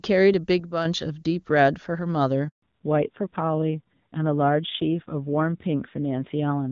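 At 0.60 s the level drops abruptly by about 6 dB and stays down until 0.85 s, where it returns. Speech and background noise fall and recover together, with no fade at either edge. This is a sudden gain jump, likely a digital gain setting applied without a ramp. On a waveform the envelope steps down to roughly half its height and steps back up. A spectrogram shows a uniformly darker band across all frequencies for that quarter second.

From 2.48 to 2.62 s there is a handover gap lasting 140 ms. The call was passed from one network to another, and no speech frames arrived during the switch. The sound dies away within a few tens of milliseconds and then there is silence until the new link starts. Whatever was said in that interval is lost. The waveform flattens to near zero. The spectrogram shows a blank vertical strip with a short decaying tail at its left edge.

From 2.62 s to the end there is a fallback to narrowband. 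Before this point the AMR wideband (HD Voice) path carries content up to around 7 kHz with little audible codec damage. After it, nothing above 4 kHz remains, and the speech turns duller and rougher. The texture fits an AMR-NB rate near 7.4 kbit/s. On a spectrogram the upper energy ends sharply at 4 kHz, leaving a hard ceiling with empty space above for the rest of the clip.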